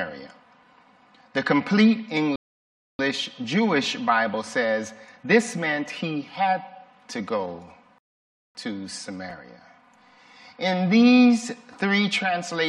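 At 2.36 s the audio just drops into silence for about 0.63 s, then picks up at 2.99 s right where it left off. That's a rebuffering stall: the player burned through everything it had downloaded and had to sit and wait for more data. Nothing goes missing, you just get a dead gap. The same thing happens again from 7.98 s to 8.55 s, adding roughly 0.57 s before the sound carries on seamlessly.

Around 9.30 s there's a brief garbled flicker. That's chunks out of order: a tiny slice of audio, about 5.8 ms long, landed one chunk late and plays after the piece that should have followed it. All the material is there, but the swap creates three hard joins packed into a few milliseconds, so you hear a quick jumbled moment rather than a gap.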